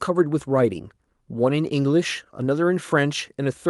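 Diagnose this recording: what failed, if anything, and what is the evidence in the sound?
Nothing has gone wrong here: the speech comes across intact, and the top end stopping at around 12 kHz is just what you'd expect from a normally working Opus call path.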